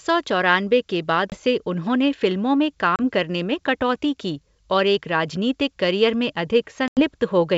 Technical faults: packet loss on an ADPCM call

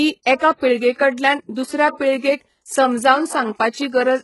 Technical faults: HE-AAC compression; pre-echo

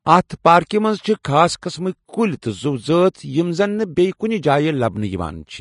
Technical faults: Vorbis compression

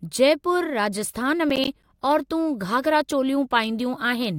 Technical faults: processor overload crackle

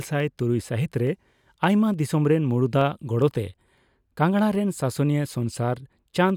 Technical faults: clock drift buffer slips

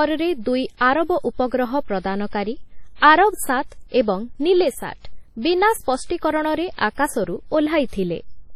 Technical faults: WMA compression; sudden gain jump

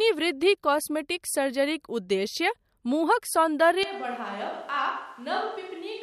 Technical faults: switch to a distant microphone

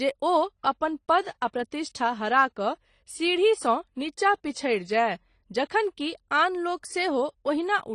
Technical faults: transcoding between lossy codecs

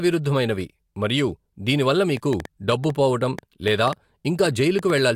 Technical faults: train of clicks

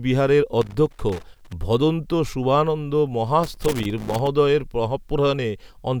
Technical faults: loose connector crackle

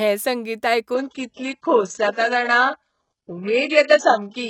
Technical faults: adaptive stream at a lower bitrate

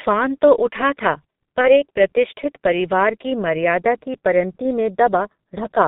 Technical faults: G.723.1 codec; VoIP packet loss concealed by the speech codec

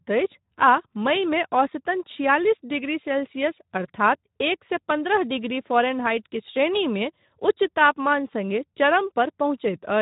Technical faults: Speex codec

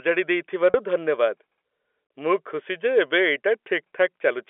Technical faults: packet loss with pitch repetition

